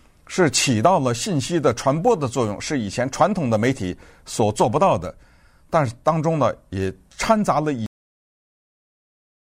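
A speech recording with a cut-off end: at 7.86 s the sound stops mid-utterance and falls straight to digital silence with no decay, which lasts the remaining 1.7 s. The final buffers were never written. Unlike a fade-out or a dropout, the signal neither tapers nor returns.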